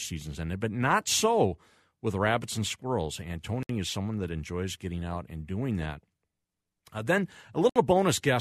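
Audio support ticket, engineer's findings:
Gap at a join of encoded pieces: 62 ms silence at 3.63–3.69 s, before "is someone that enjoys", and 64 ms at 7.69–7.76 s, every 4 s. Segmenter/encoder: untrimmed delay and padding.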